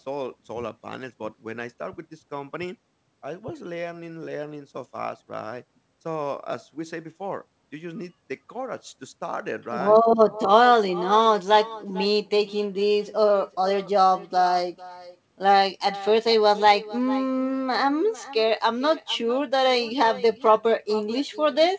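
From start to finish every phrase gets a faint ghost about half a second later: an echo with no canceller. The far end's loudspeaker feeds its mic and the sound returns uncancelled, thin, about 18 dB down, with everything stopping around 8 kHz, which fits G.722.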